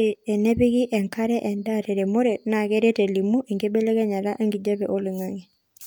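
Nothing in this recording stands out as a technical fault, so there's no problem to point to anywhere along the way.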